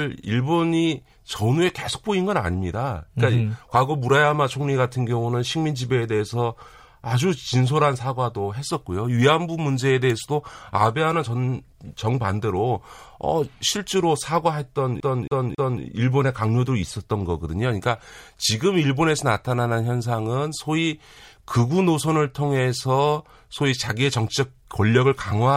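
Speech, and at 15.0 s it catches in the classic CD stuck on one turn stutter until about 15.8 s. The same 0.27 s slice of audio plays three times, each repeat broken by a quick mute where the pickup jumps. That's a scratch knocking the laser back a track at the same spot on every rotation, so you get that fast, perfectly even loop until it finally tracks past the damage.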